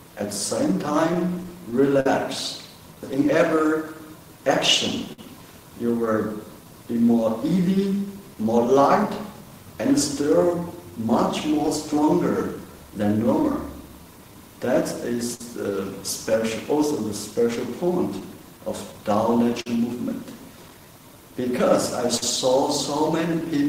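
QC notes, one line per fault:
Throughout: clock drift between sender and receiver. The timing is never quite steady, with small hiccups at uneven intervals across the whole clip and an overall pace that drags slightly. The sender's clock runs roughly 4 percent slower than the receiver's. The receiver's buffer keeps draining faster than it refills, so the receiver must repeatedly stretch the audio or pause briefly to wait for more. This drift drives the corrections below.
0.86–2.06 s: repeated stalls (stutter). The sound stutters and drags here, catching five times in just over a second. Each catch holds the last sound a moment before moving on, the longest for 52 ms. Together they add 90 ms of filled audio, about 8 percent of the stretch, with nothing lost. Packets arrived more slowly than they played, so the buffer ran empty again and again and the receiver bridged each wait.
2.95–23.68 s: repeated timing corrections. 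From here to the end the tempo feels subtly unsteady, with faint hiccups scattered unevenly rather than any single obvious break. The receiver keeps inserting short repeated pieces, all in the same direction, playing the material at about 98 percent speed and adding roughly half a second in total. It does this to keep pace with the slower sender clock, and each small edit is barely audible alone.
5.13–5.19 s: short stall from a late packet. A sound is held too long here, with a slight buzz or dip in the sustain, before the audio picks up exactly where it left off. One packet was not there when due, and the buffer ran dry. The receiver stretched the previous sound for 54 ms until the packet arrived, which raised the delay by the same 54 ms. Nothing is missing.
15.35–22.23 s: scattered short gaps. Across this stretch there are brief ticks and smears, around four of them, spread apart rather than clustered, while the audio stays clear between them. 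A few packets arrived late, one at a time, and the receiver patched each hole by continuing the last sound. The longest patch is about 50 ms, and all of them together come to roughly 150 ms, around 2 percent of the stretch, with no content lost.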